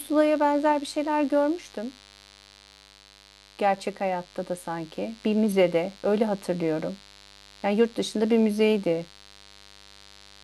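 From the first second to the end, a mains buzz sits under the speech, locked to a 50 Hz supply. Something in the chain, such as a dimmer, a rectifier or a missing shield, is letting sharp switching spikes through twice per mains cycle, so the interference carries a dense series of 50 Hz harmonics stretching up into the kilohertz range. It sits roughly 25 dB below the speech and is heard as a steady, raspy buzz rather than a smooth hum.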